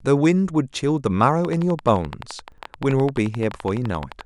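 From 1.45 s to 4.22 s, a train of clicks runs at a regular 11.6 per second, roughly thirty in all, peaking a few dB above the speech. It is likely interference or a faulty connection or power supply. The clicks sound like steady ticking, and on a spectrogram they appear as evenly spaced thin vertical lines.

Between 2.52 s and 2.64 s, the chunks play out of order. A 60 ms chunk arrives one chunk late and plays after the chunk that should follow it, leaving three hard joins. This produces a brief jumbled stutter, and the waveform shows abrupt discontinuities at each join.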